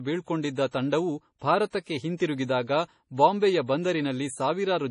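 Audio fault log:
Throughout: MP3 compression, likely. The speech sounds heavily watery and swirling as weak frequency lines switch on and off between frames, and nothing remains above 10.6 kHz, a fixed treble cut. The extent of damage fits a low bitrate around 32 kbps.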